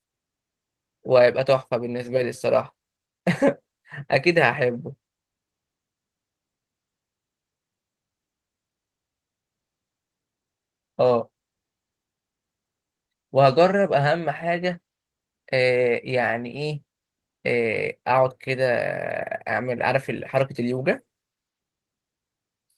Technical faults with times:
none

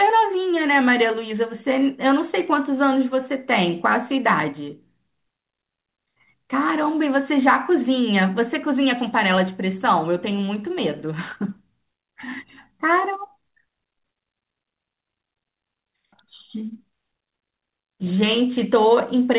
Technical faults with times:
none

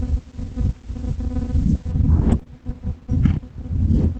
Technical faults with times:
2.39-2.48 short concealed packet loss

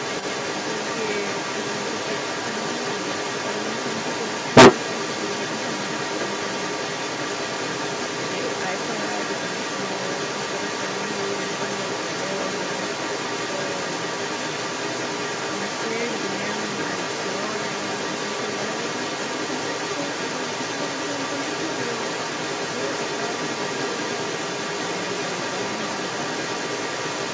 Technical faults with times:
0.00-27.34 other side's voice leaking through

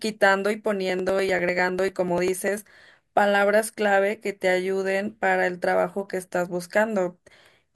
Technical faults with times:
0.90-2.68 periodic USB or driver dropouts

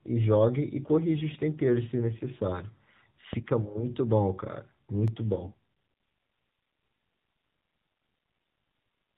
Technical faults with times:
0.00-9.17 AMR narrowband mobile codec
3.33-3.63 phantom power thump
5.08 block of digital silence
8.48-8.58 AMR bit errors

